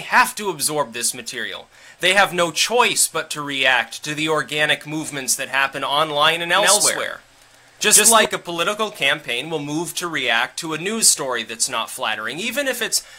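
From about 6.57 to 8.25 s there's a doubled audio track: a second full-band copy, about as loud as the original, trailing by around 150 ms with no reverb tail, cutting in and out abruptly. That most likely comes from a slower second capture path.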